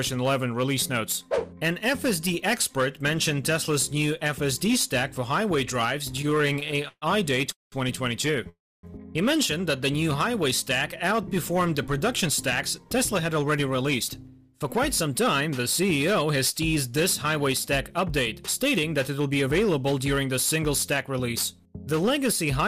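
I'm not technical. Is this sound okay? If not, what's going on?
No. Every loud moment has a harsh, crackly fuzz. That is hard clipping: the sound was too big for the equipment, so its peaks got chopped flat.

From 6.07 to 7.04 s the sound keeps catching and dragging in 17 little hiccups. These are repeated stalls (stutter): delayed pieces of a call made the playback pause again and again.

At 7.52 to 7.74 s and 8.49 to 8.85 s it holds briefly, then fades nearly to silence. Each is a call audio freeze, likely from a delivery hold-up.

From 12.28 to 18.06 s the sound runs about 5% fast, and from 18.77 to 19.58 s about 8% fast, without changing pitch. This is jitter buffer speed-up, where the receiver trims tiny slices to catch up.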